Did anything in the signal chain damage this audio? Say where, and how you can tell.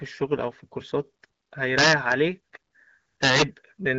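Yes. Integer overflow at a fixed-point gain or sample-format conversion stage damages this speech twice, from 1.78 to 2.12 s, where the peaks are driven about 3 dB past full scale, and from 3.24 to 3.42 s, at about 6 dB over. Instead of flattening, each peak that crosses the limit wraps to the opposite extreme, so the peaks crack violently. That sign flip across the full range is what separates it from ordinary clipping, which squares peaks off and sounds far less harsh. The light coding of the AMR wideband (HD Voice) codec at 12.65 kbit/s cannot produce cracks like these.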